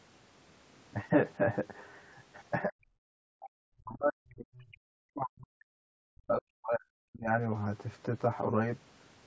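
Throughout, one channel lags the other by roughly 10 ms and the pair is summed to mono. This is channel delay (comb filtering): evenly spaced notches starting near 50 Hz give the speech a hollow, phasey colour. Unlike reverb, the colour is fixed and adds no tail.

From 2.63 to 2.86 s the speech itself dips by around 40 dB for roughly 200 ms. The likely cause is speech suppressed in double talk, with the echo canceller ducking the talker while the far side was also active.

From 3.14 to 3.49 s the room sound, not the voice, drops by about 40 dB. This is background gated by the echo canceller, which clamped the microphone while the loudspeaker played. What sets it apart is that the hole falls in the background and the ambience returns once the canceller releases.

From 3.77 to 7.29 s what is likely the same speech suppression returns for a much longer stretch, about 4 s in all. The voice sinks by up to around 40 dB.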